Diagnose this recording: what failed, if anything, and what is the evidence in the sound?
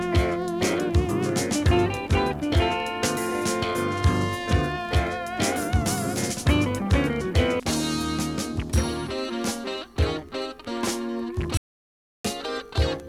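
An audio dropout to silence runs from 11.57 s to 12.25 s: the sound stops abruptly mid-flow and returns about 0.67 s later, with no room tone between. The waveform shows a flat line and the spectrogram a fully blank column, likely from lost input at the capture stage while recording continued.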